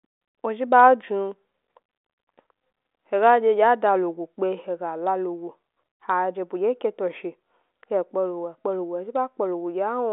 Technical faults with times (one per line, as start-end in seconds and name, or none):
none